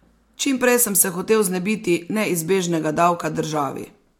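A short bit of speech, and nothing in it stands out as a technical problem at all.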